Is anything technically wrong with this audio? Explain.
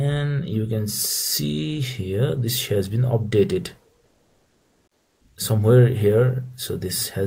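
Yes. From 4.05 to 5.21 s, there's comfort noise in place of the background. The real background gets swapped for about 1.2 s of flat, featureless hiss at the same level, about 47 dB below the loudest parts. Likely the sender's discontinuous transmission (Opus DTX) stopped sending, and the receiver synthesised filler noise.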